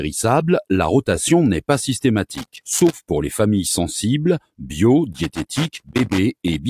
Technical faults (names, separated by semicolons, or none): loose connector crackle